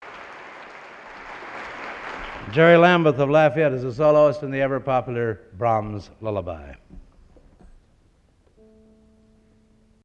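No technical faults can be heard anywhere in the recording, and the signal holds steady throughout.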